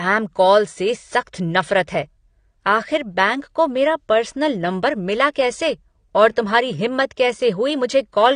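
Throughout, the speech was likely coded with AAC compression at a low bitrate, around 32 kbps. Nothing survives above 9.7 kHz, leaving it dull and smeared, with an audible warbling or fizzy texture.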